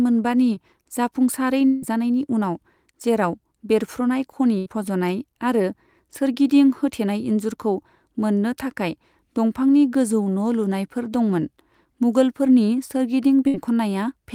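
At 0.55 to 0.58 s there is a short concealed packet loss: about 20 ms of audio never arrived in time, and the receiver stretched the preceding sound across the hole before blending back into real audio. It is heard as a quick smear rather than a gap. Its brevity and the absence of any fade set it apart from the longer losses later in the clip.

From 1.66 to 1.84 s the sound carries on artificially for roughly 160 ms, with the continued tone running almost the whole length and no silence behind it, before real audio resumes further along. This is likely a long network dropout. It is the longest break in the clip, and it is heard as a drawn-out synthetic hold rather than a brief blip.

At 4.58 to 4.68 s and again at 13.48 to 13.56 s comes a burst of packet loss, about 80 ms and then 60 ms going missing. Each time the last sound is held as a buzz or hiss that weakens as the gap continues, and the audio then picks up past the lost section. 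These bursts are longer and audibly fading, unlike the short concealed losses, but far shorter than the dropout.

A second short concealed packet loss falls at 10.24 to 10.28 s, with about 20 ms replaced by a continuation that shows up as a wobble in the flow.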